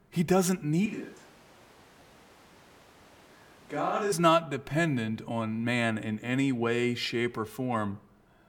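At 0.86 s, just before "not dependent on man", the speech suddenly turns roomy and hollow. The bass thins out, and the level drops by about 5 dB. A background of room noise rises to roughly 25 dB below the speech. This is most likely a switch to a distant microphone, with the close microphone's signal lost and a farther pickup covering the gap. At 4.12 s the close, full sound snaps back.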